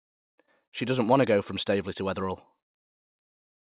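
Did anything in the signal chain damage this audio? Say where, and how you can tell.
Yes: short concealed packet loss at the network stage, 0.46 to 0.49 s. Instead of a silent dropout, the receiver stretched the preceding sound across the gap, leaving a brief smear.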